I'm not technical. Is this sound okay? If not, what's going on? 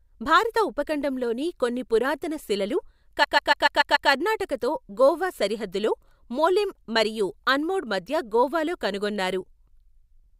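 No. Just after "ఉపఖండంలోని కొన్ని పురాతన శిలలు", from 3.23 to 4.09 s, repeated frames replay the same 0.14-second snippet six extra times, causing a stutter. Unlike a dropout, nothing goes missing, but the clip runs 0.86 s longer.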